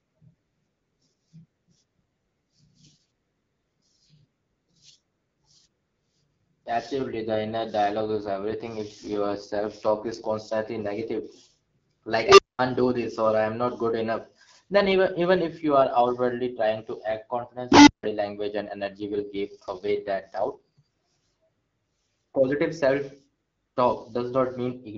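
From 7.98 to 10.30 s the speech turns raspy and synthetic. That's an AMR rate drop, with the link pushing the codec from 12.65 down to 6.6 kbit/s while the band stays the same and nothing cuts out. At 12.25 s an unstable filter runs away, swelling a tone around 400 Hz over about 127 ms until it clips, then dropping into roughly 210 ms of silence. It does the same at 17.72 s with a tone around 300 Hz, building over about 151 ms before going quiet for roughly 160 ms. The rate drop comes back from 18.97 to 20.81 s, the same 12.65 to 6.6 kbit/s fall, with that same rough edge.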